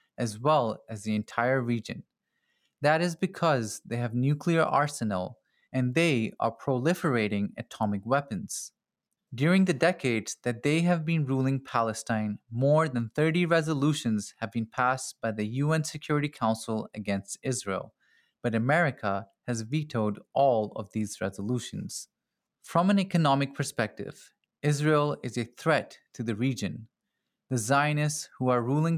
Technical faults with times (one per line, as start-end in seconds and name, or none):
none